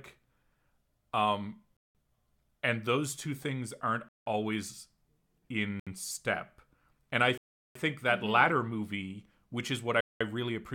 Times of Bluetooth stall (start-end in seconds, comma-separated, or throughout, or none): 1.77-1.95, 4.09-4.26, 5.80-5.87, 7.38-7.75, 10.01-10.21